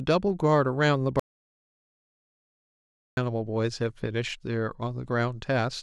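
At 1.20 s the speech cuts off mid-flow into total silence, with not even room tone underneath, and it resumes abruptly at 3.17 s. This is an audio dropout to silence: close to 2 s of material is simply gone. The dead-flat gap, rather than a fade or noise, points to the input signal disappearing while the recording chain kept writing silence, likely from a momentary disconnection, failed link or accidental mute.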